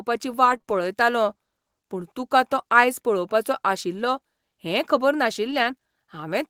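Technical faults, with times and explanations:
0.45–0.71 s, repeated packet loss (robotic sound): Three short dropouts come close together in this quarter-second stretch, the longest about 26 ms. Each time, the decoder covered the hole by stretching and repeating the sound that had just played, so about a quarter of the span, roughly 58 ms in all, is synthetic fill. Because the real signal never arrives, the pieces are stitched from recycled fragments, which gives the choppy texture with bits of the sound missing.
5.47–5.65 s, lost packet rebuilt from error correction: No gap can be heard here, but about 100 ms of the sound turns grainier and noisier before clean audio returns. That pattern fits five separate 20 ms packets that went missing and were each rebuilt from the low-bitrate backup copy carried inside the packet that followed (Opus in-band forward error correction). The decoder played those coarse copies in place of the originals, keeping the audio continuous at reduced fidelity.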